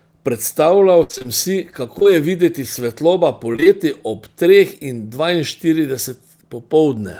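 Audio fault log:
1.03–1.26 s, repeated packet loss (robotic sound). Five gaps hit this quarter second, the longest 60 ms. About 140 ms never arrived. The receiver kept stretching the last sound to fill the holes, so over half the span is patched. The sound turns choppy, with pieces missing.
1.98–2.06 s, short concealed packet loss, two back to back, just before "je videti". Two 20 ms chunks went missing in a row. Each hole was filled by carrying the previous sound forward, then blended back into the real signal. The result is a brief smear or wobble.
3.52–3.67 s, repeated packet loss (robotic sound). Four gaps of up to 20 ms each, 80 ms missing in total. Nearly half the span is patched by repeating earlier sound. The holes are shorter than in the first run, and the result is choppy, with pieces missing.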